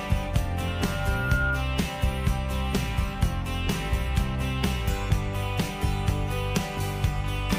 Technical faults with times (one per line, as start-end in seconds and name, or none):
0.67-1.67 loudspeaker feedback squeal